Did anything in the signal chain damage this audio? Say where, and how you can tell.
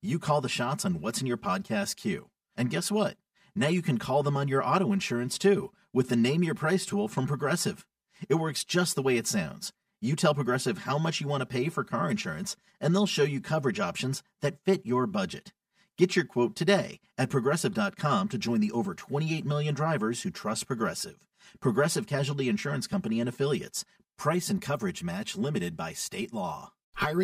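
Yes: channel delay (comb filtering) throughout the speech. One channel arrives roughly 5 ms late, so the mono sum cancels at evenly spaced notches from around 100 Hz, sounding hollow.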